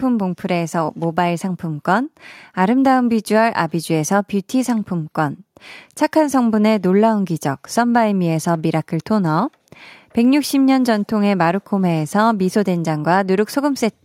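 No technical fault can be heard anywhere in this speech recording. There is no point in it where anything goes wrong.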